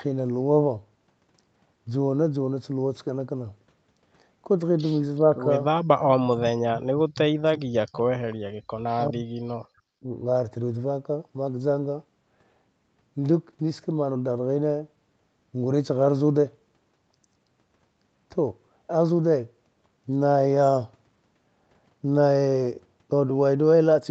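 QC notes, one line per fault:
6.33–8.0 s and 8.96–10.07 s, speech suppressed in double talk: the talker dips by around 40 dB for roughly 1.5 s, then roughly 1 s. This is likely because the echo canceller couldn't separate the talker from loudspeaker echo while both sides spoke, so it attenuated everything.
8.57–8.69 s, background gated by the echo canceller: the room sound drops by about 39 dB for roughly a tenth of a second, then returns. The canceller clamped the microphone hard while the loudspeaker played, then released it.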